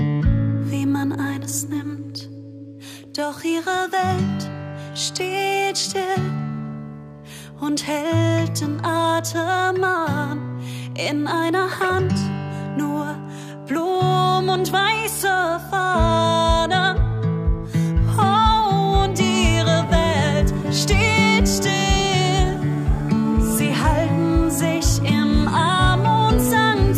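No technical faults can be heard anywhere in this recording. Nothing in the audio calls for a timestamp or any further comment.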